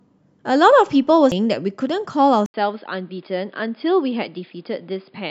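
At 1.31 s there is a tiny tick and a brief dropout of a few milliseconds, after which the speech carries on from a slightly different point rather than where it left off. This is a CD skip: a knock or a flaw on the disc threw the laser onto another turn of the spiral, so the player muted for an instant and resumed playback elsewhere on the track.

From 2.46 s the speech falls silent for 80 ms, then returns duller and boxier, with nothing above 5 kHz, about 5 dB quieter, and over a faint new background noise well below the speech. This lasts to the end. The likely cause is an input switched to a poorer device, such as another microphone or a headset's call profile, with its narrower band, different tone and noise floor.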